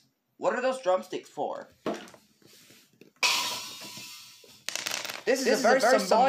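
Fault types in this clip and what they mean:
Doubled audio track: the same signal is likely being mixed in twice, with a second copy arriving through a slower path about a fifth of a second late. From 4.87 s to the end, a full-band, undecaying echo at roughly equal level abruptly doubles everything.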